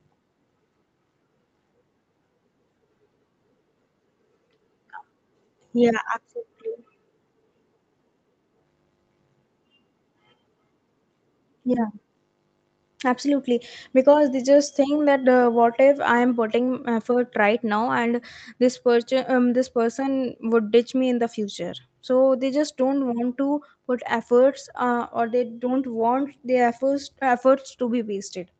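No technical faults heard.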